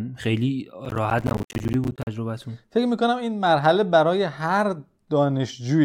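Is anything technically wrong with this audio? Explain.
Yes. Between 0.85 and 2.07 s, processor overload crackle: the processor kept missing its deadlines, apparently on buffers of around 10 ms, leaving dozens of tiny silent gaps heard as a burst of gritty crackle over the speech.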